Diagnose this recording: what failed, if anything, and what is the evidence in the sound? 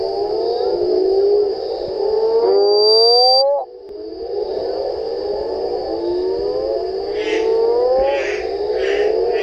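The failure is loudspeaker feedback squeal, originating in the acoustic loop between a microphone and the loudspeaker it drives. From 2.44 s to 3.44 s a single tone near 4.7 kHz rises out of the audio, swelling over roughly half a second until it sits around 5 dB above the wanted signal. At that frequency the round-trip gain through mic, amplifier and speaker exceeded unity, so the tone fed on itself.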